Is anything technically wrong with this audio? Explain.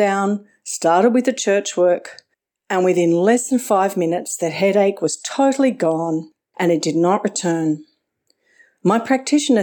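No, nothing technically wrong turns up anywhere in this speech recording.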